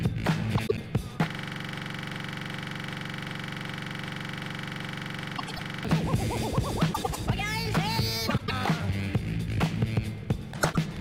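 Frames out of order first appear at 0.57–0.79 s, where two neighbouring 96 ms blocks are decoded swapped, producing a brief garbled flutter.

From 1.30 to 5.85 s a system hang loop repeats one 42.7 ms slice exactly, a steady 23.4 Hz buzz that fits a 2048-sample ring buffer cycling while the system froze.

The same block swap recurs at 5.37–5.60, 6.93–7.17, 8.28–8.51 and 10.53–10.77 s.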